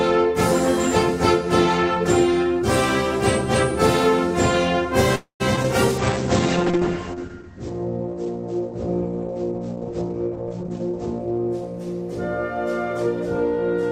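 At 5.15 s the audio stalls for about a quarter of a second, with the last sound drawn out into a fading buzz or hiss and about 110 ms of silence before it resumes at 5.42 s, nothing lost but 245 ms of delay added. This is likely a call audio freeze, where late packets left the jitter buffer empty. Just after, brief smears or wobbles at 5.56–5.59 s and 5.63–5.66 s are short concealed packet loss: each time about 20 ms of audio never reached the decoder, and the receiver extended the preceding sound to bridge the hole before blending back. From 5.98 s to 12.69 s the sound turns rough and muffled, losing its top end. This is a call bitrate drop: the encoder fell from 32 kbps to 10 kbps, staying at the lowest rate for about 5 s, and the audio bandwidth narrowed from 20 kHz to 8 kHz. Between 10.61 s and 10.91 s the audio briefly hurries, at 124% speed with no pitch change. That is a jitter buffer speed-up: with too much audio queued, the receiver trimmed short pitch-period slices repeatedly, removing roughly 70 ms to reduce delay.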